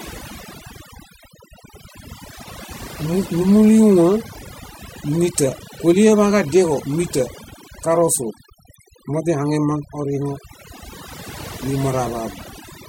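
Noise reduction has been applied far too aggressively across the whole of this speech recording, a clear case of overdone noise removal. The processor is suppressing individual frequency bands whenever their level sits close to its noise estimate, and the softer components of the voice fall under that threshold along with the noise. The background is pushed down and broken up into twinkling, chirpy specks.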